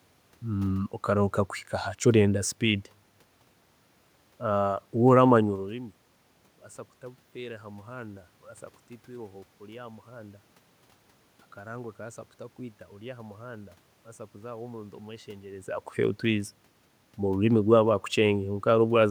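No technical faults are audible.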